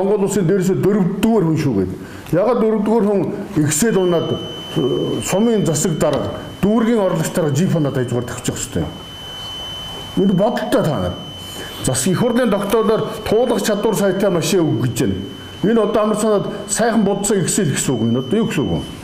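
A speaker-to-microphone loop likely hovering at the feedback point leaves a feedback whistle from 3.81 s to the end: a thin 3 kHz tone that slowly swells and fades, roughly 20 dB below the sound.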